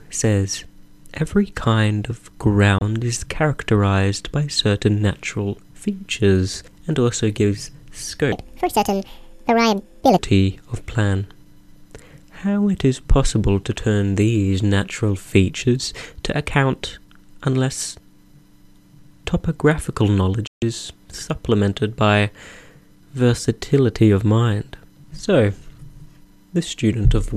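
At 2.78 to 2.82 s there's a digital broadcast dropout. The receiver lost good frames and muted with a quick 3 ms fade, leaving a 24 ms hole that fits a single lost frame. It happens again at 20.47 to 20.62 s, a longer 144 ms gap that points to about six frames gone.

From 8.32 to 10.19 s there's a section at the wrong speed. It runs 1.75 times too fast, so everything jumps up nearly ten semitones and sounds rushed. The likely cause is playback against the wrong clock.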